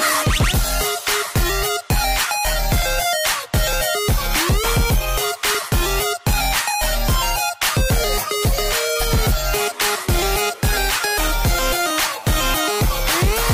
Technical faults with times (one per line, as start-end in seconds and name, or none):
1.00-12.81 clock drift buffer slips